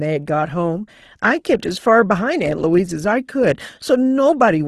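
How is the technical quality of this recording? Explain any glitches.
The recording's technical quality shows no glitches to explain.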